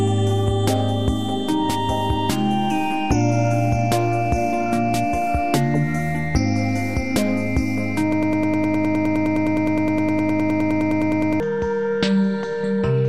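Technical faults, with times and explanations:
8.12 to 11.40 s, broken-record loop: a 103 ms fragment repeats exactly, back to back, 32 times, making a rapid mechanical stutter for over three seconds. Playback likely stalled and kept resending its last held piece, so the audio due there is lost.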